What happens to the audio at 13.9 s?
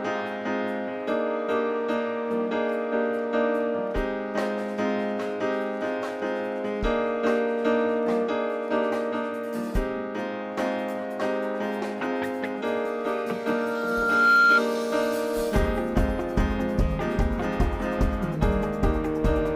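A loudspeaker feedback squeal runs from 13.42 to 14.62 s, so 13.9 s falls in the middle of it. A microphone is picking up the loudspeaker it drives, and at 1.4 kHz the loop gain exceeds one, so that frequency feeds on itself. It swells over roughly a second into a piercing single tone that ends up about 10 dB louder than the surrounding sound before it breaks off.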